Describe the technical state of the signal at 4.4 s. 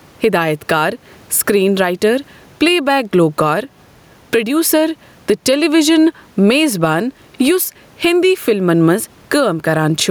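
Gain pumping is present at 4.4 s, as it is across the whole speech recording. The level swings by roughly 10 dB, and the room noise sits about 42 dB below the speech. Loud and quiet passages are pressed toward one level, giving a squashed, breathing quality. The likely cause is microphone gain set far too high, with a fast limiter clamping down on each peak.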